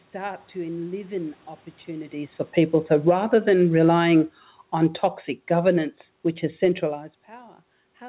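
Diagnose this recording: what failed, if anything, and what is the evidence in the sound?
The automatic gain control in the call processing stage judged the input too loud, or its background noise too strong, and lowered its gain gradually. From about 2.48 s, just after "to enliven opportunities for", the speech sinks steadily until about 6.99 s, ending about 8 dB quieter. The room noise underneath falls by the same amount, which shows the whole signal was turned down by the gain stage, not only the voice.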